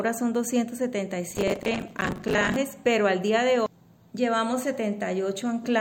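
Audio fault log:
1.31 to 2.56 s, processor overload crackle: the processor falls behind and misses buffer deadlines again and again, around seventy in all, with each short block lasting roughly 10 ms. Each missed block is filled by replaying stale audio, so every slot starts and ends with a hard discontinuity. Packed together over about a second and a quarter, these jagged joins produce a dense, gritty crackle riding over the sound, which clears once the load eases at 2.56 s.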